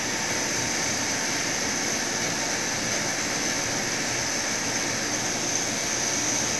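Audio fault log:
No faults detected.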